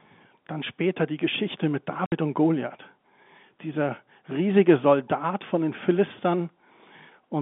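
From 2.06 to 2.12 s, packet loss filled with silence leaves a hard-edged 60 ms hole that fits three 20 ms packets. Concealment would have smoothed or repeated the sound instead.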